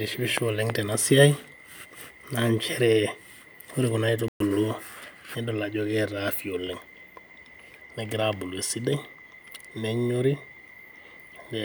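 At 4.28 s, just after "ore kuna", the speech drops into silence for 120 ms until 4.40 s, then resumes. This is a playback stall, most likely the player running short of data or having its output thread blocked briefly.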